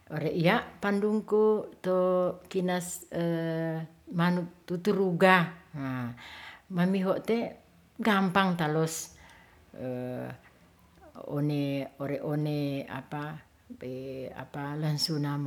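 No technical faults can be heard at any point in the recording.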